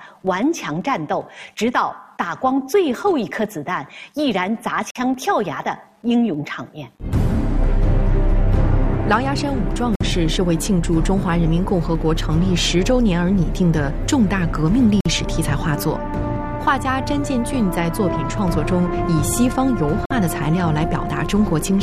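At 4.91, 9.96, 15.01 and 20.06 seconds, the sound drops out for 50 ms each time. This is a gap between chunks. The audio arrives in 5-second blocks, and silence sits at every join. Nothing is lost.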